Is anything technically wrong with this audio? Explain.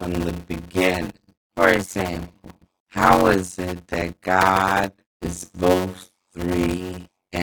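Yes. A block size mismatch (padded) runs throughout the speech: each stage writes shorter blocks than the next reads, fitting a 256-sample block, and the remainder is zero-filled. The speech carries a 92 Hz buzz and plays at 0.53 times speed, near normal pitch.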